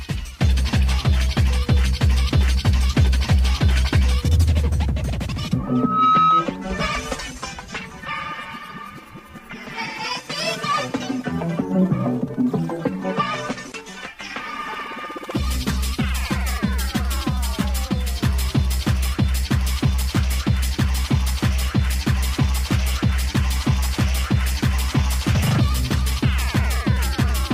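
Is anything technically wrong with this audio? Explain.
Yes. A loudspeaker feedback squeal runs from 5.67 to 6.49 s. A microphone is picking up the loudspeaker it feeds, and at around 1.3 kHz the loop's gain goes above one, so that frequency keeps reinforcing itself on each pass. It is heard as a single tone at 1.3 kHz that swells over roughly 0.4 s until it sits about 5 dB above the rest of the sound, then stops at 6.49 s.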